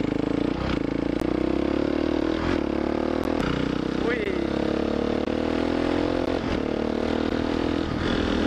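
Gaps between stream segments cut short hard-edged silences into the audio at 1.20, 2.21, 3.24, 4.24, 5.25, 6.26 and 7.30 s, roughly once a second. Segment timestamps don't quite meet, so each silence runs about 5 to 16 ms, with nothing actually lost.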